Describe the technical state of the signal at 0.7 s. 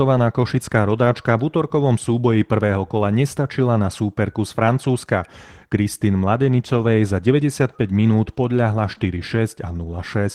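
At 0.7 s the speech carries Opus voice compression, present across the whole clip. Linear prediction codes the band below 8 kHz, with a transform layer above, at a rate that fits about 16 kbps. Coarse excitation makes the damage plainly audible, hoarse and slightly robotic.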